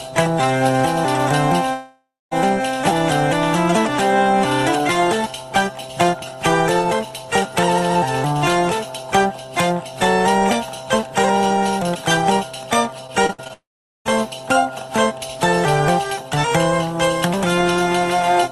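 From 1.73 to 2.33 s, about 0.6 s of audio goes missing in what is likely a long network dropout. The last sound is stretched into a fading buzz, then about 0.25 s of silence follows before the sound resumes with that portion gone.

Between 13.07 and 13.51 s, repeated packet loss produces a choppy, robotic texture. Five short holes, the longest 56 ms, are each patched by extending the preceding sound. About 27% of the span is concealed, leaving it fragmented.

Straight after, from 13.53 to 14.07 s, a second long network dropout, again the likely cause, removes about 0.52 s. A brief smeared continuation decays into roughly 0.43 s of silence before the audio returns further on. Throughout, the Opus call path limits the top end at 12 kHz.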